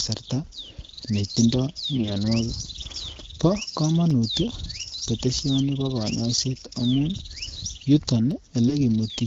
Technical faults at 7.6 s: none

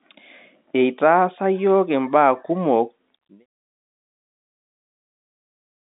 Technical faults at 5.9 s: none

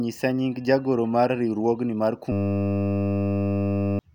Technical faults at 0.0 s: none

